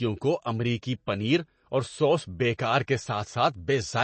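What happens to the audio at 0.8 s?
At 0.8 s the speech sounds watery and swirly, with nothing above about 8.3 kHz, as it does throughout the clip. This is likely MP3 compression at a starved bitrate, which fits around 32 kbps: the encoder cuts the treble and lets weak frequency lines flicker.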